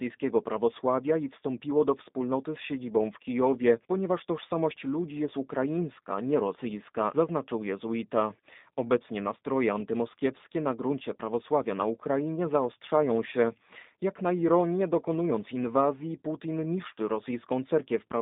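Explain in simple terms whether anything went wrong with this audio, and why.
The speech sounds thin and muffled from start to finish, with a slightly rough, synthetic edge. This comes from the G.729 codec, a phone-call format that rebuilds the voice from a compact model and discards everything above about 3.8 kHz, losing crispness.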